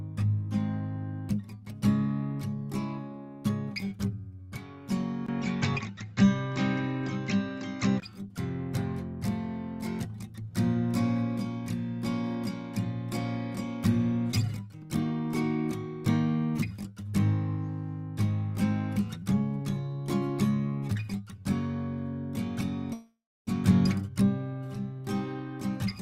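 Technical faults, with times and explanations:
5.26–8.02 s, input switched to a poorer device: the music abruptly loses everything above 7.6 kHz, turning dull and boxy, with a 20 ms silence at the switch, a shift in level of roughly 5 dB and a faint new noise floor far beneath the music, before full bandwidth returns at 8.02 s. A plain low-pass filter would not do this. Tone, level and background change together at once, which likely points to a change of capture device.
22.93–23.49 s, call audio freeze: the last sound is stretched into a fading buzz that decays into about 280 ms of silence, and the gap totals 535 ms. The music then resumes exactly where it stopped. Nothing is skipped, so everything afterwards runs 535 ms late. A packet-loss dropout would lose material instead. Here a delay likely emptied the jitter buffer, and the receiver filled the wait rather than cutting ahead.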